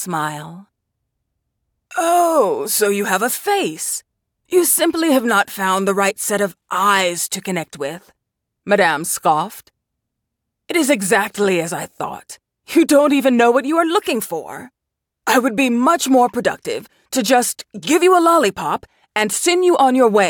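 No technical faults are audible.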